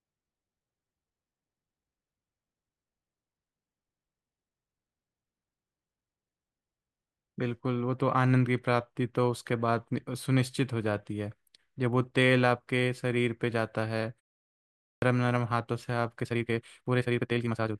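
At 14.61 s the speech returns after a pause of about 0.49 s. It comes back with a clipped start after the pause. The opening 410 ms is missing, so the sound runs to 15.02 s before it is whole again. The output device has gone idle in the gap and is slow to wake. The first sounds are lost, and the speech jumps in abruptly from silence.

From 16.20 s to the end at 17.80 s there is a time-stretched section. The pace suddenly rises to 1.86 times normal, but the pitch stays where it was. The result sounds rushed. This is likely software squeezing the audio to fit a set length, keeping pitch by cutting out small pieces.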